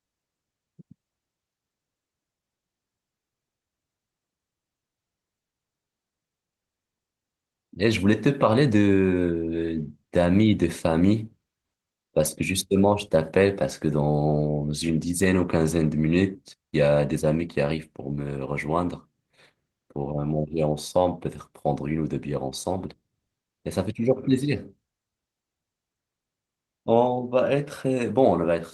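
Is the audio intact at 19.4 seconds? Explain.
Yes, at 19.4 s the speech is intact and carries no fault.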